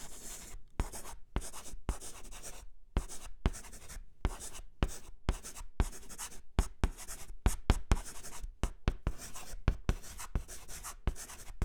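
At 4.21 s the sound skips forward. A short piece, roughly 30 ms, is missing. The audio on either side is butted together with no gap of silence. This is audio missing between chunks. The likely cause is a recorder or processor handling the signal in 5-second blocks. It drops a sliver while closing one block and starting the next. The result is a brief jump in the sound rather than a pause.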